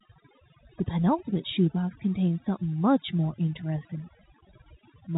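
From start to end, overdone noise removal is at work. The reduction was set too strong. It pushes bands near the noise estimate down to nothing, taking quiet parts of the speech too. The background drops and breaks up into twinkling specks. The telephone band stops near 3.8 kHz, as expected for G.711 A-law.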